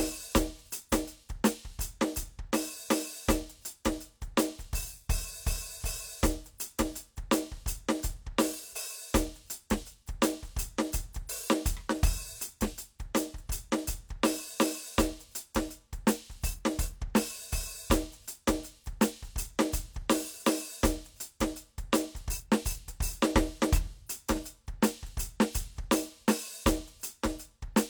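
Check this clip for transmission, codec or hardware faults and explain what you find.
No faults turn up anywhere in this music clip.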